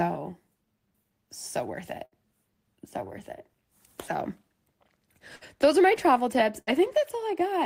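Speech with three bursts of packet loss: after "so worth it" (2.05–2.15 s), before "those are my travel" (5.36–5.44 s), and after "are my travel tips" (6.61–6.70 s). Each time the last sound gets stretched and faded for about 60 ms, then 60 ms of audio is gone.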